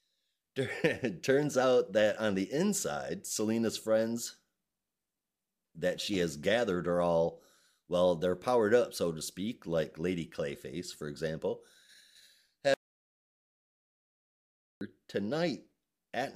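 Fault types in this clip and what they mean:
Audio dropout to silence: at 12.74 s the speech cuts off mid-flow and the signal falls to silence, with no room tone or noise floor underneath, until it resumes abruptly at 14.81 s. About 2.07 s of material is missing outright rather than attenuated. The likely cause is a momentary loss of input, such as a disconnected device, a dropped link or an accidental mute, while the recorder kept writing silence.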